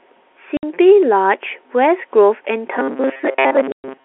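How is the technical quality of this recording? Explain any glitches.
Poor quality: the telephone-band G.711 sound is clear at first, but dropouts and a robotic stretch damage it.

Packet loss filled with silence: at 0.57 to 0.63 s (60 ms) and 3.72 to 3.84 s (120 ms), lost packets become hard-edged gaps, flat waveform and blank spectrogram columns.

Robotic sound from repeated short buffers: from 2.78 s to the end, the sound becomes a metallic 134 Hz buzz, likely from repeating a roughly 7.5 ms buffer while most real audio is skipped. It shows as evenly spaced spectrogram stripes.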